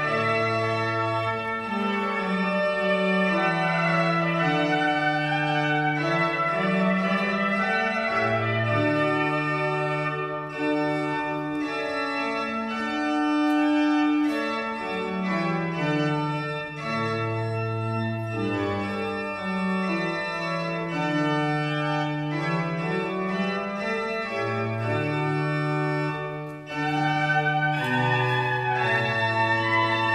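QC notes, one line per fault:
Nothing stood out on listening.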